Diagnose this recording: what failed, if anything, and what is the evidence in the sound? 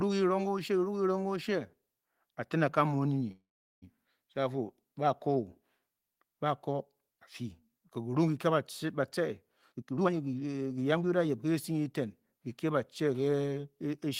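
The network stage is the likely point of failure: packets stalled in transit and the receiver's jitter buffer drained, producing a call audio freeze. From 3.31 to 3.84 s the last sound is stretched into a fading buzz that drops to silence for about 0.4 s. The speech then resumes exactly where it broke off. Roughly half a second was inserted and nothing was lost, so everything after this point runs 505 ms later.

The buffer stage then over-filled, probably as delayed packets arrived in a burst, and the receiver corrected with a jitter buffer speed-up. Between 9.62 and 11.07 s it cut out short slices of audio, each one or a few pitch periods long, again and again. Around half a second was discarded in total. The speech plays at about 135% speed with its pitch unchanged, so that stretch sounds noticeably rushed.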